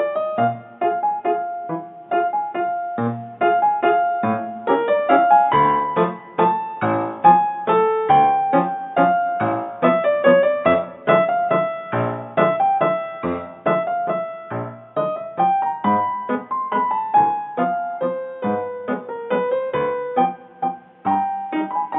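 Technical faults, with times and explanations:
No technical faults can be heard anywhere in this recording of sounds. There is nothing here that calls for a time or an explanation.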